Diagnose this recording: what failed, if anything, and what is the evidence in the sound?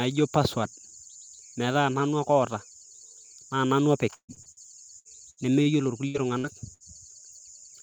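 The failure is on the network path, with repeated packet loss (robotic sound) from 4.15 to 5.69 s. Nine gaps fall in that stretch, the longest 131 ms. The receiver covers each hole by extending the last bit of speech, about 0.41 s of patching in all. Roughly a quarter of that span is concealment. The speech turns choppy and machine-like, and about 240 ms of real audio never arrives.

Three separate bursts of packet loss follow, also network-side, at 6.08 to 6.17 s, 6.38 to 6.47 s and 6.74 to 6.83 s. Each drops about 60 ms of speech. The receiver fills each gap for roughly 56 to 66 ms by continuing the preceding sound and fading it down. The speech then picks up further along, with that short piece simply gone.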